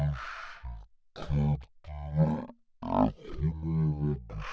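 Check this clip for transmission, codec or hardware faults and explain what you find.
There is one fault, lasting the whole clip. Wrong sample rate, throughout: the samples are clocked out far slower than they were captured, with no conversion, so the speech runs at one third speed and drops about 19 semitones, dragging and very deep, which fits 48 kHz audio played at 16 kHz.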